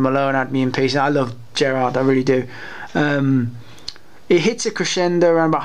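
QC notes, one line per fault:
No faults found.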